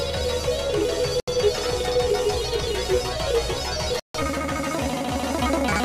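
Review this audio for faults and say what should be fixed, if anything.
Two dropouts to silence occur, at 1.20 s lasting about 76 ms, and at 4.00 s lasting about 149 ms. The likely cause is a Bluetooth stall. Interference delayed packets, the headphone buffer emptied, and playback paused until retransmissions arrived. Keep the phone close, away from other 2.4 GHz traffic.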